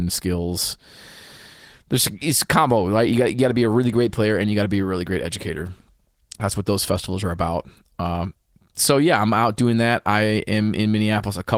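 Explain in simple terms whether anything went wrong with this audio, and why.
Nothing went wrong here: the speech comes through as it should, carried by ordinary Opus voice compression, and there's no glitch or dropout anywhere to point to.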